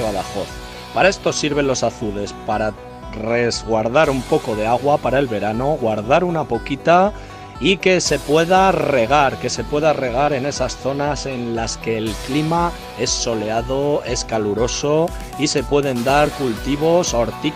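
At 4.29, 10.28 and 16.27 s, an overlap between stream segments occurs: neighbouring 6-second segments claim the same moment, so a few milliseconds of real sound are discarded and the waveform jumps. Each is heard as a tiny skip, spaced evenly, with no inserted silence, unlike a dropout.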